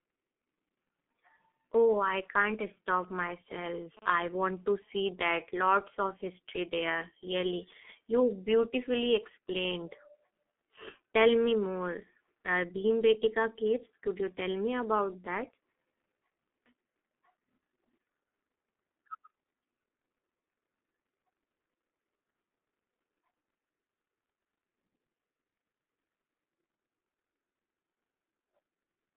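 Throughout the speech runs through a G.723.1 codec at 6.3 kbit/s over a telephone-style band of roughly 200 Hz to 3.4 kHz, with nothing at all above 3.8 kHz. The damage is heavy. Voices sound muffled and hoarse, and consonants smear because the codec's 30 ms frames and slow-moving voice model cannot follow quick changes. Plain band-limiting would only dull the sound. The rough, throaty texture is what marks this codec.

From 3.03 to 3.99 s, GSM signalling bursts from a nearby 2G phone break in. The audio circuitry rectifies the radio pulses into a galloping dit-dit-dit of short buzzes at a 217 Hz rate, at around 20 dB below the speech. Its broken, rhythmic grouping sets it apart from the steady buzz that follows. Here the phone transmits only intermittent clusters while it signals the network.

From 4.02 to 6.12 s the pattern turns into continuous GSM phone buzz, as the phone settles into call transmission and pulses 217 times a second without a break. 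The result is a hard, raspy tone at 217 Hz, rich in harmonics and sitting about 34 dB under the speech, with no relation to what is being said. Its 217 Hz fundamental and gritty edge distinguish it from smoother 50 or 60 Hz mains hum.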